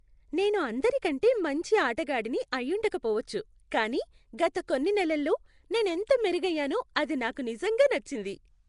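A low-bit-rate transform codec, likely Nellymoser compression, starves weak bands of bits and fills them with noise throughout the speech. The result is a rough, hissy halo, a smeared underwater quality, and nothing above 10.6 kHz, which fits a stream of around 44 kbps.

At 2.91 s, the codec spread its quantisation noise across a block containing a sharp attack, producing pre-echo. About 11 ms of hiss leaks in ahead of the onset, so the attack just before "పోవచ్చు కానీ" sounds softened and smeared.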